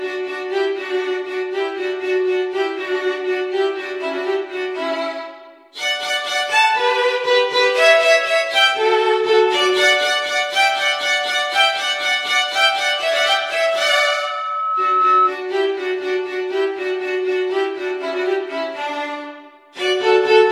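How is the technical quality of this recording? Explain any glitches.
The recording is marred by one clear glitch near its end, a loudspeaker feedback squeal. From 13.37 to 15.35 s, a steady tone at 1.3 kHz swells over roughly two seconds until it sits about 5 dB above the rest of the sound. The microphone is hearing its own loudspeaker, and at that frequency the loop gain passes one, so the tone feeds itself. A spectrogram would show a thin, brightening horizontal line at 1.3 kHz, and the waveform's envelope would grow steadily through that span.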